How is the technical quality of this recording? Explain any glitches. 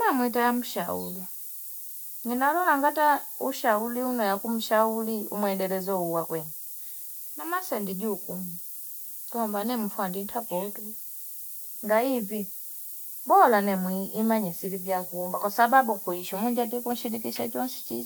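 The technical quality is poor, because one fault covers the whole recording. Low bit depth with noise shaping runs from start to finish. The speech appears to be quantised to about 7 bits, and the rounding error is fed back so its energy is pushed up the spectrum. You hear a steady, thin hiss that grows sharply brighter toward the top, only about 10 dB below the speech. On a spectrogram it is a constant noise floor rising toward the upper edge, present even in pauses. The waveform shows visibly stepped, grainy levels.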